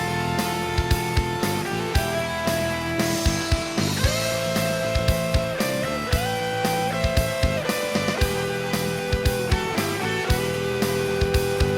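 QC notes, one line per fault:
No technical faults are audible anywhere in the signal.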